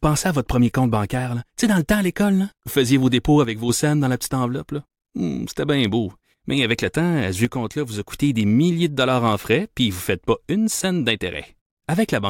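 At 3.45 s the speech level drops abruptly by about 6 dB, holds there until 3.69 s, then returns just as suddenly. The same step happens again from 7.45 s to 8.14 s. The tone and content stay unchanged; only the loudness steps down and back. The likely cause is one channel dropping out: with identical material on both sides, losing one halves the mono sum, which gives exactly this 6 dB dip with sharp edges.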